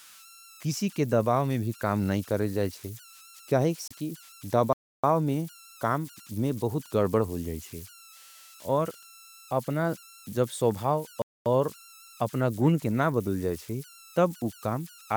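Throughout the speech there are converter idle tones: a whistle around 1.5 kHz, plus a grainy texture, sitting about 24 dB below the speech. An undithered delta-sigma converter settles into repeating bit patterns on low-level input, and those patterns produce a tone heard in pauses and under quiet passages.

At 3.88 to 3.92 s there is damaged data in the compressed stream. It is a 40 ms disturbance where the decoder misreads corrupted frames, loses sync and resumes at the next valid header.

Two playback stalls follow, each a sudden gap in mid-flow. The first runs from 4.73 to 5.04 s, about 0.31 s of silence. The second runs from 11.22 to 11.46 s, about 0.24 s, and ends just before "और अपना गुन के". The likely cause is the player running out of buffered data or its thread being blocked, so output stops until it recovers.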